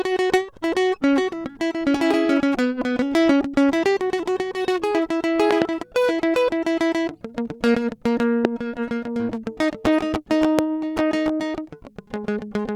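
Loud pops break through the music three times. At 5.51 to 5.64 s there is a double pop, two sharp hits in quick succession, followed by single pops at 8.45 to 8.47 s and 10.59 to 10.61 s, each peaking about 20 dB above the music. The likely cause is a sudden voltage pulse from a plug, switch, static discharge or driver glitch, which later circuits round into a thump. Unlike a dropout or a digital click from a discontinuity, the music carries on unbroken underneath each pop.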